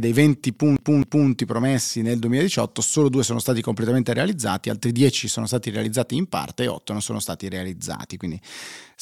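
A speech recording with a CD stuck on one turn: from 0.76 to 1.29 s, a scratch throws the laser back one track, so a 0.26 s slice repeats twice with a brief mute at each jump, just before "promessi nel".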